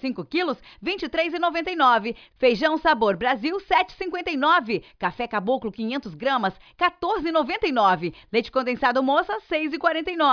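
No technical faults are audible.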